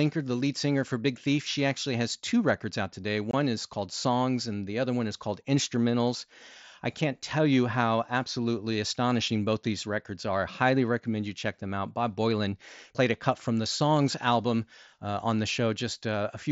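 At 3.31 s, right after "two records out today" and just before "is called", there's a spot of unconcealed Bluetooth headset packet loss. A gap of about 22.5 ms drops out of the speech with hard edges, so you get a tiny abrupt hole rather than a smooth fade. That length fits roughly three lost mSBC frames between headset and phone, with nothing patched in to cover them. Around it, the mSBC codec's light graininess on louder syllables is still audible.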